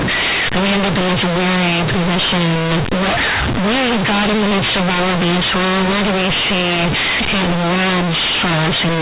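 From the very start and right through the speech, you're hearing companded audio read as linear: A-law bytes are being played as plain 8-bit samples without expansion, so every sign flip throws the waveform across half its range. Quiet bits come out as loud as loud ones, giving harsh, buzzy distortion and heavy noise in the pauses, all sitting inside the 4 kHz ceiling of the A-law telephone coding underneath.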